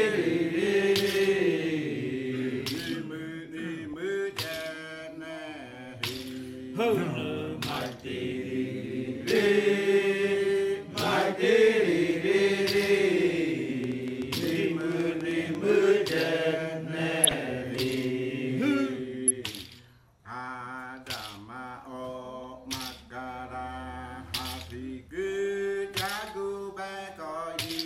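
At 3.93 s, bit errors from weak reception slip past the error correction into the MP2 data, causing DAB burbling. Corrupted samples put short noise blips in single sub-bands and corrupted scale factors make sub-bands leap in level for up to a frame, so there is a brief watery blip. The error rate behind it points to only a small fraction of a percent.

From 13.84 to 16.17 s, a train of clicks appears, likely from interference or a faulty connection injecting repeated pulses. About 15 similar clicks land at an uneven pace of roughly six per second, peaking about 10 dB above the sound, and are heard as ticking over it.

DAB burbling returns from 17.24 to 17.34 s and from 19.11 to 19.31 s. Damaged sub-bands jump around across what sounds like several consecutive frames, producing blips of noise laid over the audio.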